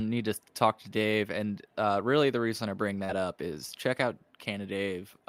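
At 3.04 to 3.10 s, short concealed packet loss: 40 ms of speech never reached the decoder, which extrapolated a 42 ms patch, heard as a brief smear.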